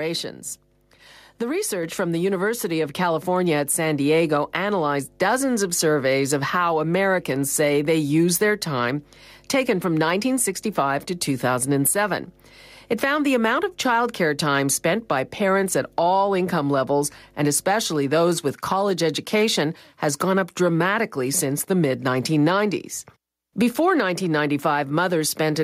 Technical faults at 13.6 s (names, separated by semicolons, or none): mains hum